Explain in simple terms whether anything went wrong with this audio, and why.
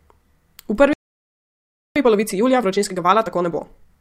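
At 0.93 s the speech just stops dead and stays silent for about a second, until 1.96 s. That's a playback stall: most likely the player ran short of incoming audio or got held up, so it had nothing to send out until it recovered.

Right after, from 1.96 s to 3.90 s, the speech comes out hurried, about 1.5 times normal speed but at its normal pitch. That's time-compressed catch-up: the player snips out tiny pieces and blends the joins to make up the lost time.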